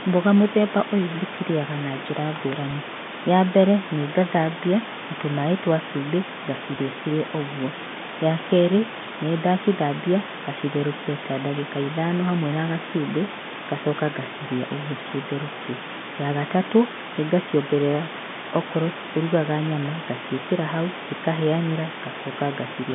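Packet loss with pitch repetition occurs at 2.71 s and again at 6.75 s, between "na tũmaĩ twa cumbĩ" and "cirĩ ũguo". Each gap is about 10 ms, which fits a single lost packet. The receiver fills it by repeating the last pitch period, so the sound briefly holds with a slight buzzy smear over the G.711 telephone band.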